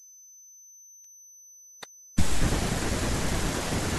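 From the start, converter idle tones sit about 26 dB below the speech: an undithered delta-sigma converter cycles through a repeating pattern, giving a whistle around 7 kHz rather than broadband hiss. At 1.04 s, overlap between stream segments removes about 9 ms at a segment join, so the waveform jumps and a tiny skip is heard, not a dropout gap.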